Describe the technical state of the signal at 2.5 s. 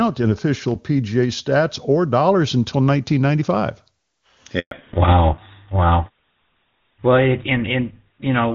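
At 2.5 s the speech signal is intact, with no fault at that moment, carried through the AMR wideband (HD Voice) codec at its top rate of 23.85 kbit/s.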